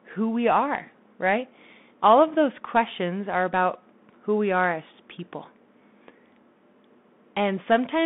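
A speech clip carried throughout by a Bluetooth CVSD headset codec: energy sits between 150 Hz and 3.6 kHz, a flat ceiling on a spectrogram, with s sounds scratchy and a grainy hiss thickening the waveform's quiet floor, which fits 64 kbps one-bit delta coding.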